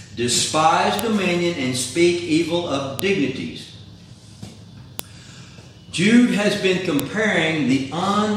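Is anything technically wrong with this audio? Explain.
Yes, the file header is played as audio: sharp clicks at 0.99, 2.99, 4.99 and 7.00 s, every 2 s, where un-stripped chunk headers become samples. Each appears as a brief waveform spike and a thin full-band vertical spectrogram line.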